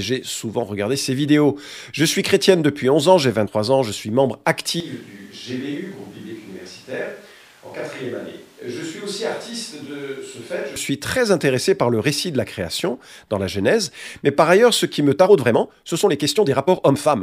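At 3.44 to 3.48 s, a short stretch of the compressed stream carries damaged data. The decoder can't parse the frames there, loses sync and has to hunt for the next valid frame header before it can resume. The result is a brief glitch, about 40 ms long.

From 4.80 to 10.76 s, the close microphone's feed likely dropped out, leaving a switch to a distant microphone further from the talker. The sound abruptly turns roomy and hollow, with thinner low end. The level falls by about 10 dB, and room noise rises to sit only about 25 dB below the speech. At 10.76 s the close, full sound snaps back just as suddenly.

From 15.09 s to the end of the clip, the final section is time-stretched, likely by software squeezing it to fit a target length. To keep the pitch unchanged, the process discards short slices of the waveform rather than simply playing faster. The pace jumps to 1.4 times normal while the pitch holds steady, and the speech comes across as rushed.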